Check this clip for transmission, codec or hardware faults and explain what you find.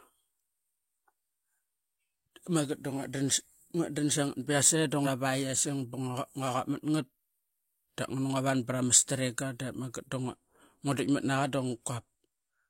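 Two faults are audible in this speech clip.

From 5.02 to 5.07 s, damaged data in the compressed stream makes the decoder lose sync. It sounds like a brief glitch, seen as a smeared broadband patch on a spectrogram.

From 8.71 to 8.73 s, a single loud pop, likely from a voltage step or driver glitch, rises about 5 dB above the speech. It shows as a sharp waveform spike and a thin vertical spectrogram line.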